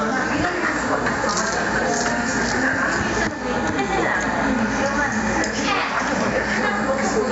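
A clip of everyday sound with gain pumping all the way through: the gain swings by roughly 10 dB around loud sounds, so levels get squashed together. That's likely mic gain set far too high with a fast limiter clamping down. Nothing above 8 kHz comes through the call path.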